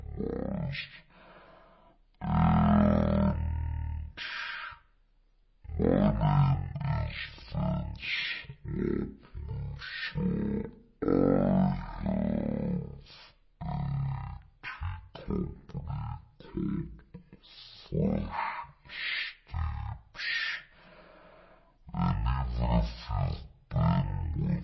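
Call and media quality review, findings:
Speech throughout: drastically slowed and deep, running at about a third of normal speed, pitch down 17.6 semitones. Wrong sample rate at playback, no conversion; speed ratio 0.363 fits 44.1 kHz audio played at 16 kHz. Check output clock config.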